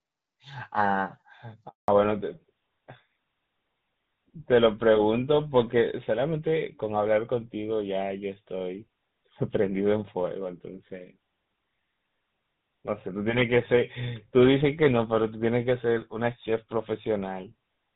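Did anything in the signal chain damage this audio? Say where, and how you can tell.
Yes, at the network stage. At 1.68 s the sound cuts out in a handover gap lasting 200 ms, to 1.88 s. The level falls away within a few tens of milliseconds, and nothing comes through until the new link picks up. On a waveform this is a flat line of silence after a short taper, and on a spectrogram a clean vertical blank band across all frequencies. The phone switched networks and no frames arrived in that window, so that stretch of audio is lost.

From 1.88 s to the end, the call shows a fallback to narrowband. Before the gap the audio has HD Voice bandwidth with light codec colouring, consistent with AMR-WB at around 12.65 kbit/s. After it, nothing is left above 4 kHz, and the sound turns duller and rougher. A spectrogram shows energy reaching toward 7 kHz in the first 1.7 s and then a hard ceiling at 4 kHz for the rest, which fits GSM full-rate coding taking over on the new link.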